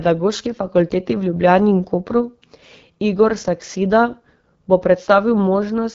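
From start to finish, the speech carries the sound of the AMR wideband (HD Voice) codec. The encoder models speech up to 6.4 kHz as pulses through a vocal tract filter. It then fills the band above that with shaped noise. Nothing is heard above about 7.4 kHz. The coding damage is plainly audible, with a rough, raspy texture on the voice. That roughness fits the 8.85 kbit/s mode, one of the codec's two lowest rates.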